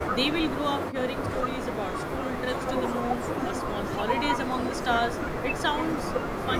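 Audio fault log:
No faults heard.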